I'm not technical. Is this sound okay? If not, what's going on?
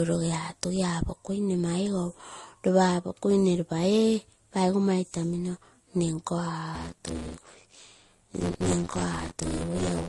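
No, it has two problems. Throughout, the speech sounds dull, with nothing above 12 kHz and several different kinds of artefact heard together. That combination is most likely transcoding between lossy codecs: the recording was squeezed by one compressor and then recompressed twice more, ending in Vorbis. A single compression pass tends to give one consistent kind of blur. Here several different kinds are stacked on top of each other.

From 6.75 s to the end at 10.08 s, a rough, robotic buzz of about 86 Hz rides on the speech. This is buffer tearing: the playback system hands over audio in small chunks, which fits a 512-sample buffer, and in each chunk roughly two-fifths is stale audio from about 40 ms earlier, with hard joins on both sides. Unlike mains hum, this buzz is present only while someone is talking and disappears in pauses.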